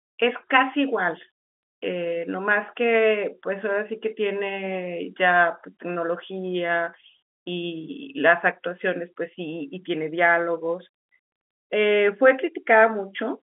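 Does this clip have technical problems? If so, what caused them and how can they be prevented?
No, no technical faults.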